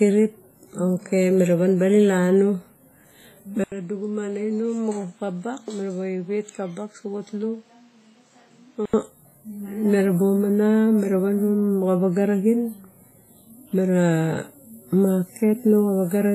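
Across the whole recording the speech carries heavy transform-codec damage, likely WMA compression at a low bitrate around 24 kbps. It sounds ringing and washy, with hiss that breathes along with the voice. A spectrogram shows smeared, blurred energy, patchy gaps where weak components vanish, and nothing above 15.2 kHz.

From 3.64 to 8.94 s the sound turns duller and quieter, likely because the input switched to a poorer device. An 80 ms silence marks the switch. The spectrogram ceiling falls to 8.2 kHz, and the waveform shrinks by about 10 dB. A new noise floor sits roughly 35 dB under the speech.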